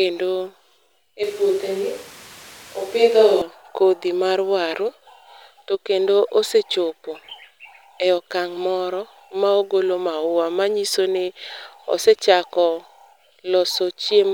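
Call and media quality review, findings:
Switch to a distant microphone, 1.23–3.42 s. Close mic feed likely dropped, with pickup falling back to a far-field mic. Speech turns abruptly roomy and hollow, with thinner bass. Level stays about the same, and room noise sits around 25 dB below speech. Sudden return at 3.42 s.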